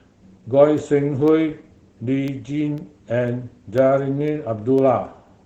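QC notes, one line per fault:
Throughout: Opus voice compression. The codec is running in its SILK speech mode at 12 kbps with wideband bandwidth and 20 ms frames, so the signal is modelled by linear prediction and its excitation is coded coarsely, and nothing above about 8 kHz survives. The result is plainly audible damage: the speech sounds muffled and slightly hoarse, with a faint robotic edge where the coarse excitation fails to reproduce natural breathiness.
0.28 to 5.28 s: Periodic USB or driver dropouts. Every 0.5 s a background task stalls the audio path, and a tiny slice of the stream, only a fraction of a millisecond, is replaced by silence, about ten times across this span. Each gap is a sudden step to zero and back inside the waveform, so it comes through as a small, evenly timed tick or click, heard only where speech is sounding.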